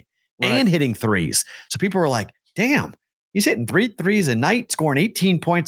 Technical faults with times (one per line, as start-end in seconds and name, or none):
none